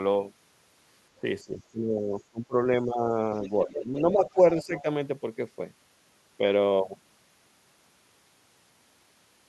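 Speech suppressed in double talk comes first, at 1.18 to 1.25 s and 1.44 to 3.13 s. The echo canceller likely mistook overlapping talk for echo and turned the speech down by as much as about 20 dB. Next, the other side's voice leaks through at 3.34 to 3.49 s, likely from echo left uncancelled, as a faint scrap about 30 dB under the speech. Suppression returns at 3.64 to 4.38 s, with shallower dips. From 4.33 to 4.82 s the leaked voice is stronger, about 20 dB down, while the speech drops again at 4.62 to 4.85 s.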